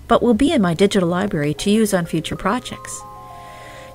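Lost LE Audio frames at 0.47 s: a gap of about 7.5 ms, which fits a single missing LC3 frame, is filled by the decoder reusing the previous spectrum with randomised signs, so the sound briefly turns into a short noisy smear instead of going silent.

CD scratch ticks run from 0.63 to 1.76 s: eight regular ticks, each around 2 ms at most, where a scratch corrupted more data on every disc revolution than error correction could rebuild, leaving the player to interpolate or mute those samples.

Lost LE Audio frames again at 2.32 s: another 7.5 ms concealment, pointing to one more lost frame, heard as the same brief smeared, noise-like patch.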